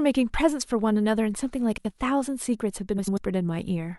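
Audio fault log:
1.78–1.92 s, frames out of order: two neighbouring blocks of about 70 ms each play in swapped order, which fits runs of three codec frames. The sound jumps forward, then back. This gives a brief garbled flutter. No time is lost.
2.98–3.18 s, frames out of order: the same swap with longer blocks of about 93 ms, consistent with four frames each. The flutter lasts longer.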